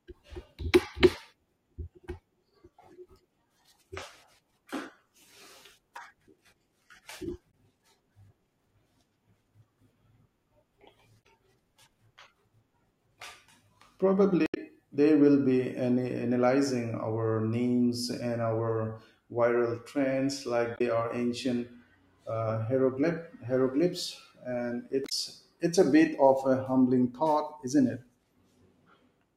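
Speech marred by damaged data in a compressed stream: brief glitches at 7.48–7.54 s, 11.20–11.26 s, 14.44–14.57 s (before "they will"), 20.75–20.81 s (between "our viral trends like" and "are ancient") and 25.05–25.12 s (after "hieroglyphs and"). Corrupt bytes make the decoder misread frames and resync, so each spot is heard as a chirp, squawk, click or short hole.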